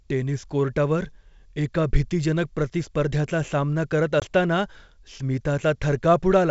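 A speech clip over a G.722 wideband call, its highs reaching 7 kHz, consistent with the full 64 kbit/s mode. Just after "प्रतिस्पर्ध्याचा सामना करत", at 4.20 to 4.24 s, a hard-edged gap is followed by slightly distorted speech. This is packet loss on an ADPCM call: about 20 ms, a single packet, went missing, and the decoder's predictor drifted out of step before recovering.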